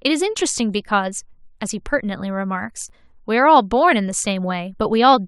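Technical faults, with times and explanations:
2.89 s, gap between stream segments: there's a tiny hard-edged dropout in the speech here, a hole of silence roughly 7 ms long with abrupt edges on both sides. Two consecutive stream segments don't quite line up in their timestamps, and the player fills the difference with silence. That adds about 6.7 ms to the timeline, but nothing is actually removed. The stream uses 6-second segments.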